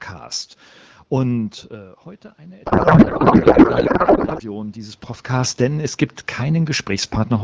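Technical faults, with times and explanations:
2.65 to 4.42 s, codec payload misread: for about 1.8 s the speech gives way to garbled noise and warble that barely tracks it. The sender packed each AMR frame in octet-aligned form, but the receiver read it as bandwidth-efficient. The frames still looked valid, so the decoder kept decoding, but every field sat in the wrong place and produced nonsense parameters. Clean decoding returns at 4.42 s, once both ends agree on the packing again.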